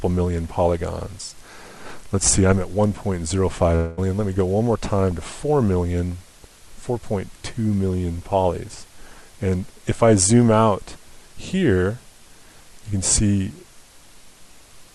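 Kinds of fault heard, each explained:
Long network dropout: At 3.75 s new sound stops arriving for about 0.24 s. The last sound stretches into a fading buzz that fills the gap without silence. Audio resumes at 3.99 s minus about 0.22 s, likely from lost packets.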